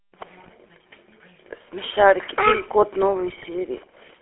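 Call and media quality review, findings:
GSM full-rate codec, throughout: buzzy, gravelly roughness on all speech, band limited to roughly 300 Hz–3.4 kHz. Regular-pulse excitation that keeps every third sample gives a grain that plain narrowband filtering lacks. The sound fits a 13 kbps full-rate stream.

GSM bit errors, 0.38–0.50 s and 3.28–3.46 s: squawks, pops and gargling bursts with level jumps, each spanning several 20 ms frames. Corrupted filter, pitch and gain parameters reach the decoder, pointing to a bit error rate of around 2%. Lost-packet concealment would instead repeat or fade, not garble.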